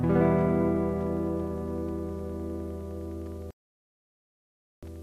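At 3.51 s a digital broadcast dropout mutes the audio until 4.83 s, a gap of 1.32 s. The receiver stopped getting decodable frames, about 55 by the length, and silenced output. Unlike analogue fading, there is no hiss, only clean silence and lost material.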